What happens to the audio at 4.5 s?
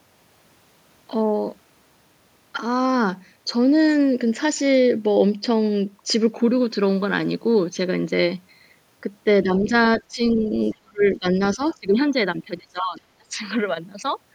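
Nothing goes wrong at 4.5 s; the speech carries on intact through that moment, with no dropout, click or other fault.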